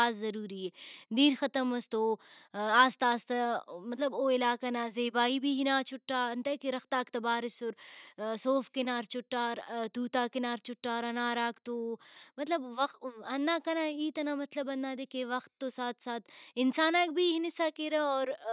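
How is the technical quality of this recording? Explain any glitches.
No glitches turn up anywhere in this speech recording. No working path is listed to comment on, so there is nothing further to describe.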